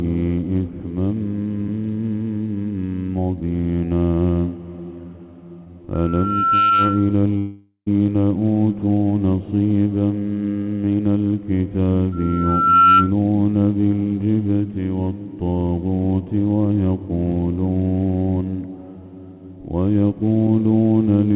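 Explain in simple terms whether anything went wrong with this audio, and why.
At 5.64 to 5.68 s there is a tiny smear or wobble, a short concealed packet loss. A few hundredths of a second of the call arrived too late, and the receiving phone covered the gap by briefly stretching the sound just before it.

From 5.94 to 7.17 s, and again from 12.12 to 13.13 s, a single high whistle near 1.4 kHz swells up over well under a second into a squeal. This is loudspeaker feedback squeal: a microphone picked up its own loudspeaker, and that one pitch kept amplifying itself around the loop. The second squeal is noticeably louder than the first.

From 7.38 to 7.88 s the sound turns into a fading buzz and then goes briefly silent, and it resumes with about half a second missing. The likely cause is a long network dropout. No audio came through, so the phone filled in as long as it could and then gave up.

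Throughout, the audio has nothing above 4 kHz, which is normal for this kind of phone call.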